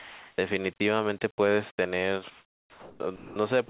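Speech gives way to steady comfort noise at 0.00–0.38, 0.76–0.80, 1.74–1.78, 2.30–3.00 and 3.16–3.36 s, likely sound dropped by the voice detector, cutting sound it took for background in the 4 kHz-limited telephone-band audio.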